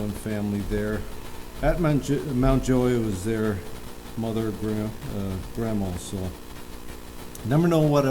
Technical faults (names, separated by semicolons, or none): none